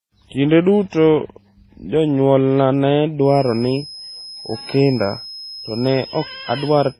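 Throughout, overlapping smeary and swirly artefacts, likely from transcoding between lossy codecs (MP3 then HE-AAC), colour the speech; the spectrogram shows nothing above 14.8 kHz.

From 3.19 s to the end, a feedback whistle at 5.1 kHz sits about 20 dB under the speech, likely a near-unstable speaker-to-microphone loop, drawn as one horizontal spectrogram line.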